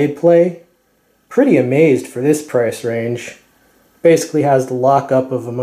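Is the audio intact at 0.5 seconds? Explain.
Yes, at 0.5 seconds the audio is intact, with no dropout, click, distortion or other fault to be heard at that moment.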